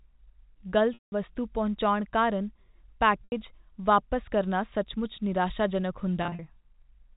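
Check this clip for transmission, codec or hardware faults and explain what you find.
Two kinds of fault are present in this G.711 mu-law telephone speech, which passes only up to 4 kHz.

Packet loss with pitch repetition occurs at 0.94–1.12 s (180 ms, ending just before "ਵਸਤੂ ਪਹੁੰਚਾਉਣ ਕਾਰਨ"), 3.24–3.32 s (80 ms), and 6.23–6.39 s (120 ms lost in runs up to 40 ms, spread over 160 ms). The receiver loops the last pitch period, so the gaps sound like a buzzy held tone, and the longer ones fade to silence before the speech cross-fades back.

Low bit depth with noise shaping runs from 5.10 to 6.60 s. The audio is reduced to 10 bits, and noise shaping pushes the rounding error upward, producing a thin hiss that rises toward the top of the band, around 35 dB below the speech.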